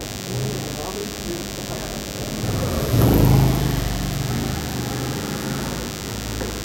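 From start to finish, the recording carries a DECT cordless phone buzz: a thin, rasping tone at 100 Hz sitting only about 10 dB below the wanted sound. A nearby DECT handset or base transmits a brief radio burst every 10 ms, and the audio circuitry rectifies those pulses into the signal. A spectrogram shows a comb of evenly spaced horizontal lines at 100 Hz and its harmonics, while the waveform shows regular spikes every 10 ms.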